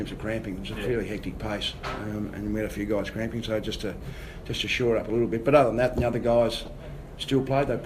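From 6.51 to 6.68 s there is a burst of DAB burbling: short blips of noise over the audio. Residual bit errors, at a rate that points to roughly 0.2 percent, slipped past error correction into several consecutive MP2 frames, corrupting audio data so noise blips appeared in single sub-bands.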